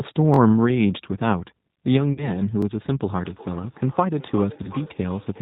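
Speech that sounds slightly rough, synthetic and dull throughout, with nothing above 4 kHz. That is plainly audible G.729 coding: the 8 kbit/s codec rebuilds each 10 ms frame from a vocal tract filter, a pitch predictor and a few pulses. At 0.34 to 0.38 s a tiny fragment stutters, playing twice more with hard joins, and at 2.62 to 2.65 s it plays once more. This is a repeated buffer: new audio arrived late, so the device replayed its last block of about 21 ms, which fits a 1024-sample buffer. From 2.13 to 2.35 s the sound smears into a fading buzzy tone or coloured noise and stays weak or distorted afterwards, and a shorter version occurs at 4.62 to 4.68 s. This is VoIP packet loss concealed by the speech codec. The gaps of 40 ms and 20 ms point to two packets and then one. The decoder extrapolated from its last pitch and filter, and the error carried forward. From 3.06 s to the end, each stretch of speech returns about 0.4 s later, thinner and ringing, at about 19 dB below the speech. 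This is feedback echo between two devices on the same call, where one device's microphone recaptures the other's playback.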